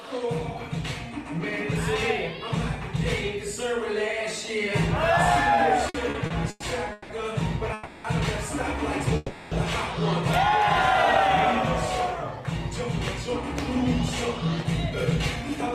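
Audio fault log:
5.89–7.11 s, repeated stalls (stutter): five brief holds, longest 170 ms, about 400 ms filled, as the jitter buffer kept emptying; the spectrogram shows short smeared, frozen bands between normal frames.
7.73–8.06 s and 9.16–9.53 s, call audio freeze: the last sound is held and fading for 310 ms and 350 ms, likely from late packets; the waveform shows a decaying plateau and the spectrogram a stretched smear.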